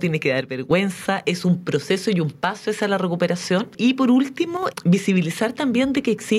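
From 0.41 to 0.71 s, the level drops abruptly by about 6 dB, then returns. It happens again, briefly, from 4.57 to 4.63 s. The likely cause is one channel dropping out. Content shared by both sides halves after the mono sum.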